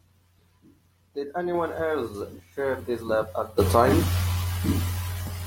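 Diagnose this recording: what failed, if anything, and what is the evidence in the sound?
Nothing failed here: the sound carries no evidence of a fault at any stage.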